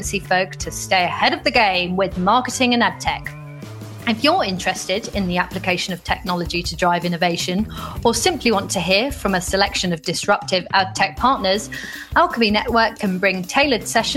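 No technical faults can be heard anywhere in this audio, and the signal holds steady and continuous throughout.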